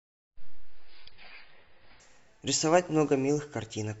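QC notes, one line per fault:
0.00–2.0 s, adaptive stream starting at a low bitrate: the speech opens dull and smeared, with nothing above 5.5 kHz and heavy codec artefacts, which fits a starting rendition around 16 kbit/s, then at 2.0 s it jumps straight to a much cleaner, fuller rendition with no gap.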